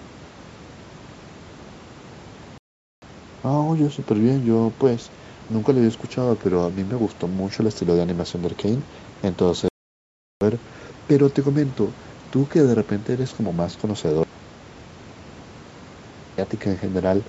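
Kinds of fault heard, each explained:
Playback stall: The speech just stops dead mid-flow and goes fully silent, once from 2.58 to 3.02 s and again, longer, from 9.68 to 10.41 s. That's most likely the player running dry of data or getting blocked before it catches up.
Audio dropout to a faint residue: From 14.23 to 16.38 s the speech cuts out abruptly for a bit over two seconds, leaving only faint hiss roughly 45 dB down. That points to the signal likely being lost while the path stayed live.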